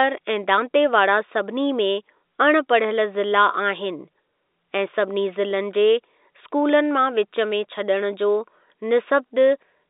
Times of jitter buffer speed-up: none

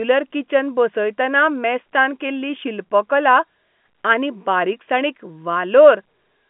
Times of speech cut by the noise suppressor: none

